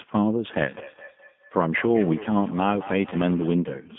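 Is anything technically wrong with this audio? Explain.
Yes. The speech goes through a G.729 codec for its whole length. The band runs only from about 150 Hz to 3.5 kHz, and the roughness fits an 8 kbit/s stream. The codec rebuilds each 10 ms frame from a vocal tract filter, a pitch predictor and a few pulses, so the speech sounds plainly rough and synthetic. A spectrogram shows a hard ceiling at 3.5 kHz and smeared harmonics.

There is feedback echo between two devices from 0.52 to 3.59 s. A second device in the room replays the call and the microphone picks it up again, so the speech returns about every fifth of a second at up to about 16 dB below the original. On a spectrogram it appears as faint, repeated copies of each syllable, trailing at a steady spacing.

VoIP packet loss concealed by the speech codec occurs at 0.79–0.88 s and again at 3.10–3.15 s. Each gap matches about 20 ms lost, likely a single packet. 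The decoder extends its last pitch and filter at falling gain, so the speech is briefly stretched into a fading tone or noise. The waveform shows a shrinking, overly regular stretch before speech resumes, still weak or distorted for a moment.

The missing lowest bass comes from the call's microphone high-pass filter, which is normal and not a fault.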